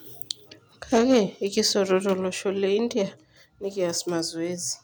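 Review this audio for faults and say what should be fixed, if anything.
From 0.94 to 1.19 s the speech peaks are flattened, with a harsh crackle about 4 dB past full scale, likely microphone overload clipping a few percent of samples at the converter. Lower the input gain so peaks sit well below full scale.

At 1.14 s the level drops by about 2 dB, then by about 4 dB at 2.13 s, affecting voice and background together. This is likely the call software's automatic gain control stepping the microphone volume down in response to the overload. Set a fixed, conservative input level and disable automatic microphone gain adjustment.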